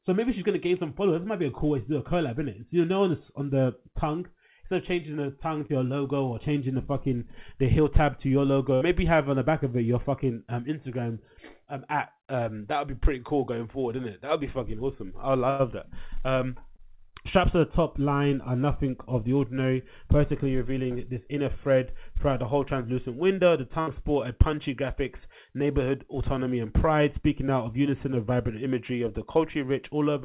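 At 5.66 to 5.72 s and again at 16.76 to 16.82 s, short concealed packet loss occurs: about 30 ms of audio arrived too late for the decoder, so the receiver extended the preceding sound and blended back, leaving a brief smear or wobble in place of the missing sliver. Bursts of packet loss fall at 8.75 to 8.84 s, 15.5 to 15.62 s and 23.81 to 23.9 s, with roughly 60, 90 and 60 ms lost in a row. Each time the receiver held the last sound and let it fade, giving a brief buzz or hiss before the audio jumps ahead past the missing stretch. The 15.5 s gap is the longest. Throughout, the call path's band limit removes everything above 4 kHz, which fits narrowband G.711 telephony coding.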